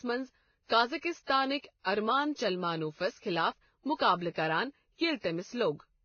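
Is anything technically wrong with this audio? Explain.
Yes. Throughout the speech, the sound carries a mix of two different kinds of codec damage. Nothing is heard above about 6.6 kHz. The top end is dull, and the two codecs' different artefacts are heard together. This is likely transcoding between lossy codecs. The pattern fits a low-rate Vorbis encode, around 17 kbit/s, later re-encoded as WMA. The second codec wasted bits on the first codec's artefacts and added its own. The lowest cut-off in the chain remained.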